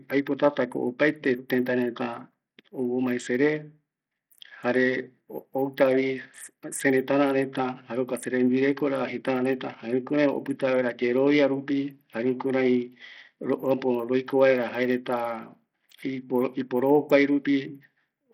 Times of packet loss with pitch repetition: none

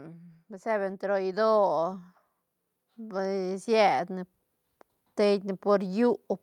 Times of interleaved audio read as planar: none

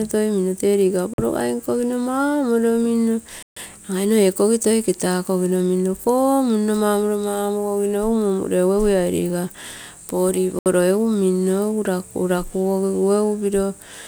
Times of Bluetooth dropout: 1.14-1.18, 3.43-3.57, 10.59-10.66

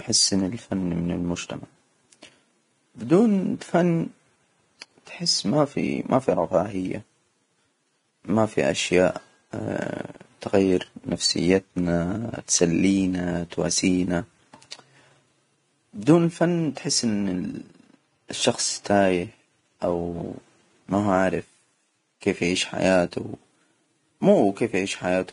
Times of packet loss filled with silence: none

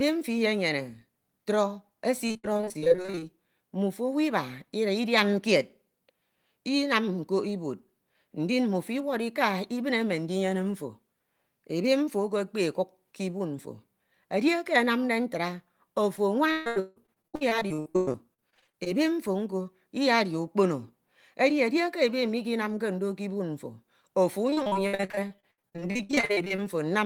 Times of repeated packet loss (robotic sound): 2.27-3.24, 16.16-18.88, 24.50-26.60

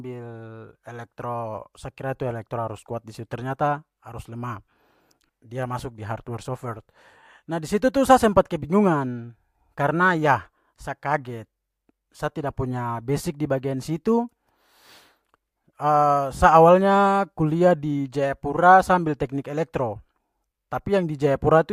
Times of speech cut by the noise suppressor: none

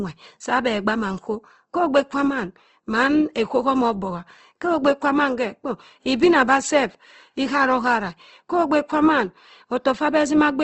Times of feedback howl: none

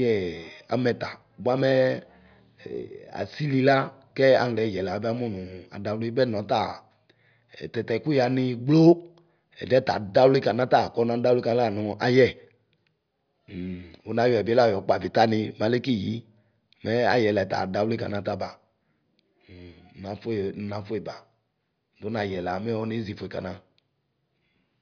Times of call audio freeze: none

